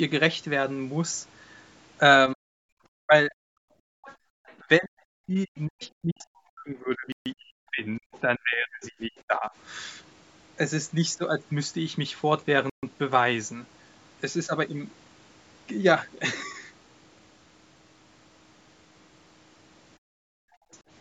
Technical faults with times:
2.34-2.50 speech suppressed in double talk
3.01-3.35 speech suppressed in double talk
3.63-4.31 background gated by the echo canceller
4.03-4.54 other side's voice leaking through
4.59-9.52 speech suppressed in double talk
5.56-5.88 other side's voice leaking through
7.12-7.26 Bluetooth stall
8.12-8.20 other side's voice leaking through
12.70-12.83 Bluetooth stall
19.98-20.71 background gated by the echo canceller

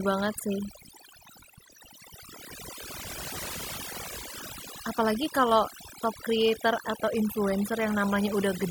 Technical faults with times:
0.00-8.71 overdone noise removal

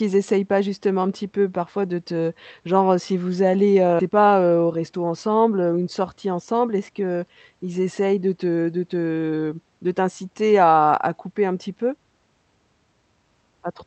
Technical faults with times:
3.99-4.10 skip ahead
4.62-4.94 jitter buffer speed-up

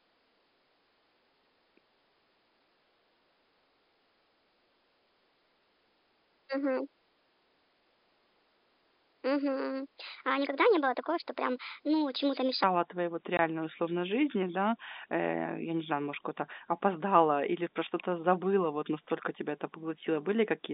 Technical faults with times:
0.00-12.64 section at the wrong speed
13.37-13.39 packet loss filled with silence

